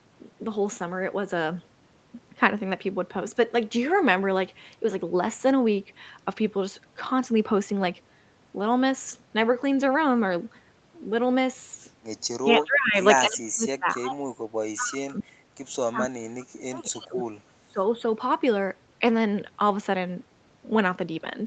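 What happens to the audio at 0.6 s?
Nothing goes wrong at 0.6 s: the speech there comes through intact, with the band-limited sound of the call path, which stops at about 8 kHz.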